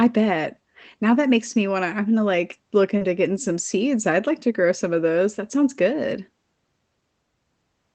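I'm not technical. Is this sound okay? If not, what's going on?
No. Right after "I'm gonna like look," at about 2.97 to 3.03 s, there's a tiny smear or wobble before "getting some seeds I'd" carries on. That's short concealed packet loss: about 40 milliseconds of the call arrived too late, so the receiving end covered the gap by stretching out the sound just before it, then blended back into the real speech. The call connection itself, which limits the sound to about 8 kHz, works as it should.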